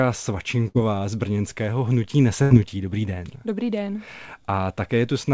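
At 0.68 s the speech briefly freezes into a held, fading sound for about 64 ms, then picks up at 0.77 s with roughly 60 ms of material skipped. At 2.42 s the same happens over about 81 ms, resuming at 2.53 s with about 90 ms gone. Both are bursts of packet loss: the receiver extended and faded the last sound to cover the gap. Audio above 8 kHz is absent throughout, consistent with a wideband call codec.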